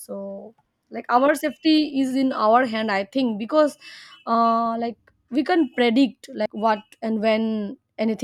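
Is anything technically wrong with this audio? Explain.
Yes, there is a CD skip at 6.46 s in this speech clip. A knock or a flaw in the disc made the laser jump to a different turn of the spiral, so the player muted for a few milliseconds and then resumed from another point in the recording. It is heard as a brief tick with an abrupt break in the speech's continuity. On the waveform it appears as a tiny flat gap with mismatched edges, and on a spectrogram as a thin vertical broadband line.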